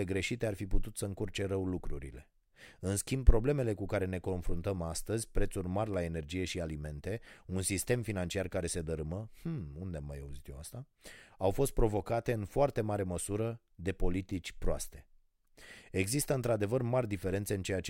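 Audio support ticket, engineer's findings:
Block of digital silence at 5.94 s in the speech: single tick. Roughly 1.3 ms of samples dropped to zero with hard edges, no fade. Length fits one 64-sample buffer left unfilled in time. Suspect audio callback or processing thread missing its deadline.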